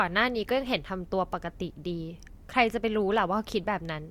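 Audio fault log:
No faults heard anywhere in the speech.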